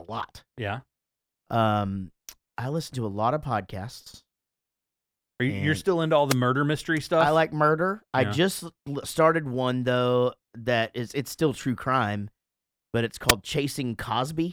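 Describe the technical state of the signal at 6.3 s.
A wireless microphone noise hit runs from 6.28 to 6.35 s: the FM radio link briefly fades as reflections cancel, so receiver noise surges into a short burst of static.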